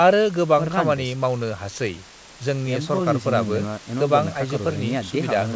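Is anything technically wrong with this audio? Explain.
No, the speech simply carries the normal signature of a call's microphone processing and a wideband call path, with the band topping out at 8 kHz in a way that fits a codec like G.722.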